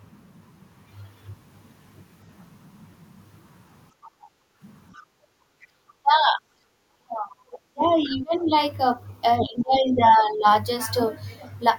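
From 3.93 to 5.75 s the background is gated by the echo canceller: while far-end audio plays, the canceller clamps the microphone, and the room sound dips by up to about 21 dB for around a second and a half in total before recovering.

Inside and after that span, the other side's voice leaks through as short, faint fragments at 4.04–4.09, 4.94–5.06, 5.61–5.66, 7.52–7.59 and 9.59–9.63 s. They sit roughly 25 to 35 dB under the speech and are likely loudspeaker echo that the canceller left unremoved.

From 6.03 to 8.5 s, and again from 9.39 to 10.46 s, the speech dips, by as much as about 30 dB in the first span and about 15 dB in the second. This is speech suppressed in double talk, likely the canceller turning down the local talker while the far end was also active.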